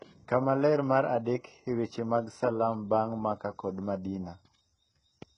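Speech with heavy HE-AAC compression throughout, likely at a very low bitrate near 12 kbps. The s sounds are gritty and metallic, and a spectrogram shows pasted-looking treble.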